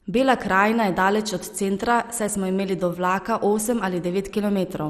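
Speech runs the whole clip dull and gurgling, with coarse granular distortion and nothing above 14.4 kHz. This is likely MP2 compression at a rate fitting 64 kbps. Starved upper sub-bands flicker on and off, unlike a plain low-pass filter's steady, clean cut-off.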